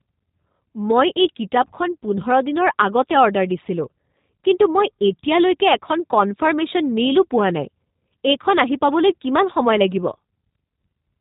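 Throughout, the speech sounds muffled, slightly rough and synthetic, with nothing above 3.8 kHz: plainly audible G.729 codec damage, consistent with its low-bitrate 8 kbit/s reconstruction.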